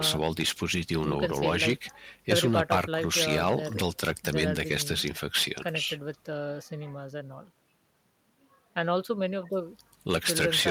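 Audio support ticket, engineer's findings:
Listened through the speech recording and found nothing wrong, so there's no fault to log on this one.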